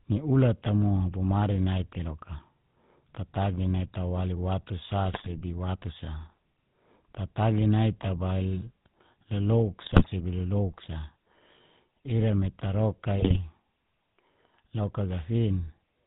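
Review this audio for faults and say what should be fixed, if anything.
GSM full-rate codec coding runs throughout: the speech has the gravelly, buzzy roughness of a vocal-tract model driven by pulses, with nothing above 4 kHz, which fits the 13 kbps full-rate mode. The damage is plainly audible. Prevent it by capturing or routing the call over a wideband codec rather than legacy GSM.

GSM bit errors hit at 5.12 to 5.42 s, 9.84 to 10.09 s and 13.18 to 13.38 s. Corrupted filter, pitch and gain values reach the decoder, so each burst breaks into squawks, pops and gargling as the spectrum warps and the level jumps. Prevent it by recording over a stronger, error-protected link.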